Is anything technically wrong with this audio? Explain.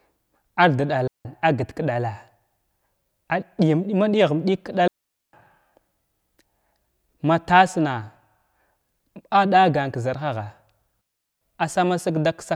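Yes. A digital wireless dropout occurs at 1.07–1.25 s (about 177 ms, just before "apt k ɗala"), at 4.88–5.33 s (about 455 ms, right after "ɗig ka") and at 11.01–11.41 s (about 402 ms). Each time, the receiver lost too much data and muted the speech with a very quick fade, leaving clean near-silence. There is no hiss or static burst at the edges, which is how an analogue wireless dropout would sound instead.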